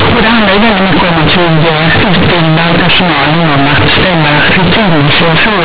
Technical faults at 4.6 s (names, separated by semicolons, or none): companded audio read as linear